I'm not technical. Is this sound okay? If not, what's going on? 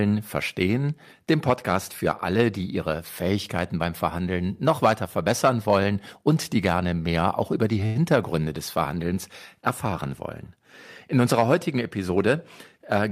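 No, there are two brief glitches.

At 7.86 to 7.97 s there is a short stall from a late packet. One chunk of the audio arrived late over the network, so the player had nothing new to play and stretched the last sound for about 91 ms until it caught up. You hear a sound held slightly too long, perhaps with a faint buzz. Unlike a true dropout, nothing is skipped: the speech picks up exactly where it paused.

From 11.98 to 12.35 s there is a jitter buffer speed-up. The player had built up extra waiting audio, so it trimmed many tiny slivers, about a twentieth of a second in total, to get back on schedule. That stretch runs about 10% faster and sounds a little hurried. Unlike a fast-forwarded tape, the voice doesn't get higher. Only the pace changes, and the pitch stays the same.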